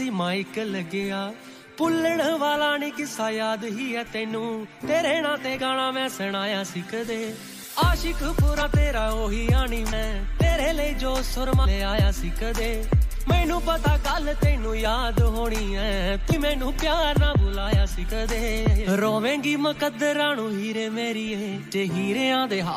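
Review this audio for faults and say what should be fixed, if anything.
Compressed frames are skipped at 8.61, 9.92, 11.64, 16.32 and 21.70 s. At each point the audio jumps ahead by roughly 200, 200, 100, 300 and 150 ms, which fits whole frames of about 26 ms being lost. To prevent it, verify file integrity after encoding and transfer, and re-encode from an undamaged source.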